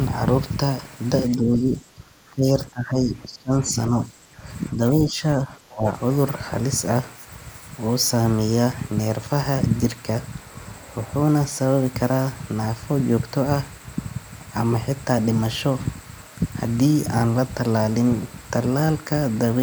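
From 1.36 to 4.44 s, 4.73 to 5.22 s and 5.41 to 5.86 s the speech sinks, the first dip by roughly 15 dB and the last by about 20 dB. This is likely speech suppressed in double talk: an echo canceller could not separate the talker from overlapping loudspeaker echo and attenuated both.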